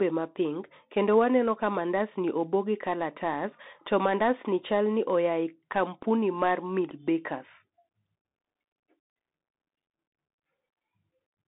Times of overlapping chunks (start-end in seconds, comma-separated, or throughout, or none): none